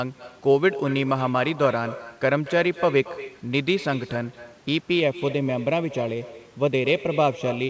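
A speech recording over a call path whose G.722 coding leaves nothing above 8 kHz. Echo with no canceller runs throughout: a copy about 16 dB quieter trails every phrase by around a fifth of a second, showing on the waveform as faint, delayed repeats of each burst. From 5.00 s to the end, channel delay (comb filtering) appears: one channel lagging by a fraction of a millisecond cancels evenly spaced frequencies, first near 1.5 kHz, drawing fixed dark horizontal stripes across the spectrogram and leaving the sound hollow.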